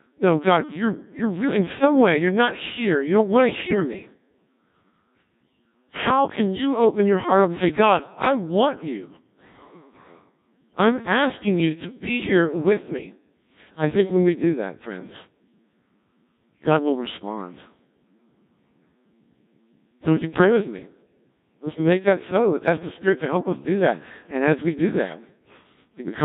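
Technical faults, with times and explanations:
Throughout: Codec 2 vocoder. Buzzy, robotic speech rebuilt from sine waves with the original waveform discarded, heavy damage fitting a rate near 1.3 kbit/s, unlike ordinary low-bitrate muffling.
3.57–3.80 s: bit errors on digital voice radio. Right after "don't want to", pitch, level and timbre lurch into warbling gibberish. That fits roughly six corrupted frames, unlike steady codec buzz.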